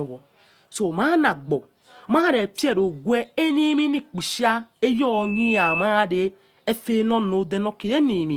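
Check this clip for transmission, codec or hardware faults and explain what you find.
Two faults are present: codec damage across the whole speech clip and a brief feedback squeal near the end.

Opus compression, throughout. The texture is rough, grainy and noisy rather than swirly, with the band still running up to about 20.2 kHz, the sign of the likely cause: Opus in its CELT music mode at a low rate, which fits roughly 24 kbps. Starved of bits, the encoder keeps each band's energy but refills detail by folding lower bands or inserting noise, so harmonics go hazy.

Loudspeaker feedback squeal, 5.12 to 5.90 s. A single tone at 2.6 kHz rises out of the speech, swelling over about 0.4 s until it sits at roughly the same loudness as the speech, then stops. The microphone was picking up its own loudspeaker, and at 2.6 kHz the loop's gain passed one, so that frequency fed on itself and grew.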